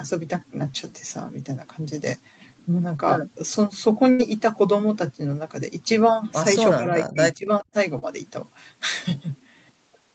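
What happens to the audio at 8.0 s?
At 7.99 to 8.04 s the speech has a short concealed packet loss: about 20 ms of audio failed to reach the decoder in time, and the receiver bridged roughly 29 ms by extending the preceding sound, using its pitch where voiced and shaped noise where not, before crossfading back into the real signal. The result is a brief smear or wobble lasting a few hundredths of a second, where a short consonant may disappear.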